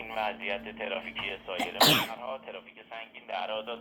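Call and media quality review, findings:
No faults found in this clip. Nothing here needs a ticket entry.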